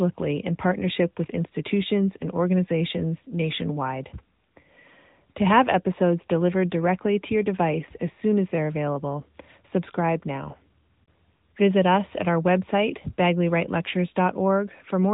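Speech runs through an AMR narrowband mobile codec from start to finish. Nothing above 3.8 kHz survives. The plainly audible buzzy, synthetic texture fits a 10.2 kbps mode.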